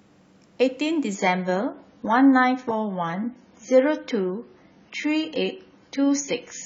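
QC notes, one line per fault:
1.15–6.65 s, adaptive stream at a lower bitrate: the stream abruptly switched, without a gap, to a far leaner AAC rendition, consistent with a 96 to 16 kbit/s drop. Everything above 7 kHz vanishes, leaving the speech dull and coarser with codec artefacts.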